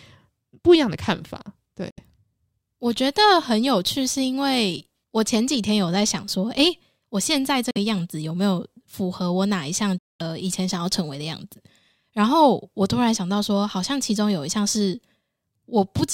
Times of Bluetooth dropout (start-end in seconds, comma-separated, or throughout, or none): 1.90-2.00, 7.71-7.77, 9.98-10.21